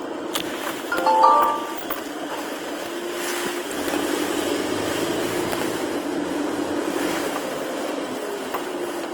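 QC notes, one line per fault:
Throughout: Opus compression. The whole clip sounds grainy and rough, with tonal parts turned noisy rather than swirling. The cause is likely the codec's music mode, which preserves each band's energy but fills starved bands with folded or noise-like content at what sounds like a bitrate around 24 kbps. On a spectrogram, bands stay filled with few holes but look smeared and speckled, with nothing above 20.2 kHz. The waveform shows little obvious change.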